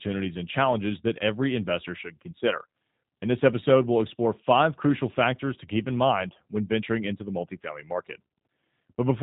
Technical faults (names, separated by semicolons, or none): G.729 codec